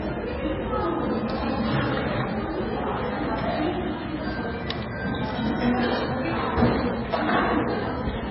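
From start to finish the audio shows heavy damage, likely from MP3 compression at a very low bitrate, one that fits roughly 16 kbps. Nothing survives above 5.6 kHz, so the top end is sheared off at a hard edge. What sets this apart from a simple low-pass filter is the texture below that edge: weak frequency components flicker in and out from frame to frame, giving a watery, swirling sound with metallic chirps and smeared attacks.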